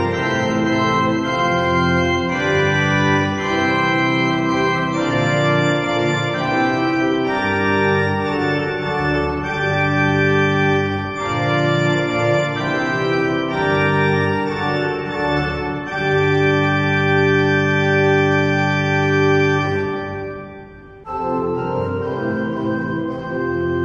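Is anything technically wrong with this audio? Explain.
No, nothing in this audio stood out as technically wrong on listening.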